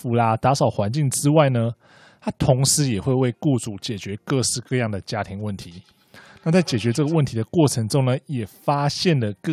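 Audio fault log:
5.61–7.21 s, feedback echo between two devices: a nearby device plays the call back and the original microphone picks it up and re-sends it, so speech returns roughly every 150 ms, about 23 dB down.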